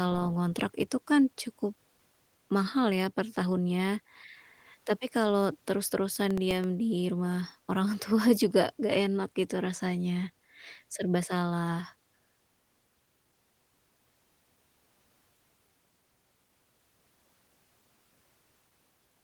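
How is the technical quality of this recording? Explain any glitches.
The recording has one glitch, a short burst of processor overload crackle. The Opus voice compression leaves only light codec damage and keeps the full band.

From 6.16 to 6.64 s, processor overload crackle tears through the speech. The processor missed a handful of deadlines for very short buffers, around a millisecond and a half each. Each miss replayed a fragment of old audio with hard edges, heard as gritty crackling that stops once the load eases.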